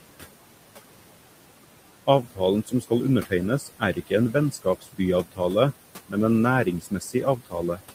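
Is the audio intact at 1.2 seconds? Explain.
No. Noise suppressor artifacts run through the whole clip, 1.2 s included. The suppressor cuts bands it judges to be steady noise by about 18 dB, frame by frame, so the room noise, about 14 dB below the speech, drops away in pauses and swells back under speech.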